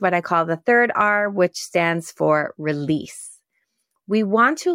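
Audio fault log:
No fault is heard anywhere in this speech recording. There is nothing to log for it.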